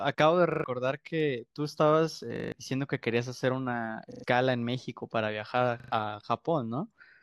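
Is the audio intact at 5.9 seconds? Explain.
No. A repeated buffer fault runs from 5.8 to 5.92 s. New audio arrived late, so the device replayed its last buffer. A piece about 40 ms long sounds four times with hard joins, a quick stutter. Roughly a tenth of a second is lost.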